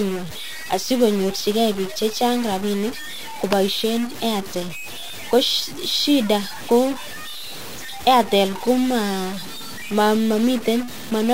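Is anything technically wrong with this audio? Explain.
Yes. Throughout the speech there is harsh, buzzy distortion, and pauses fill with noise instead of silence. This is likely a stuck bit: one data bit is held fixed, so about half the samples are off by a step of about -30 dBFS. Because that bit changes with the sign of quiet values, the gaps turn to noise.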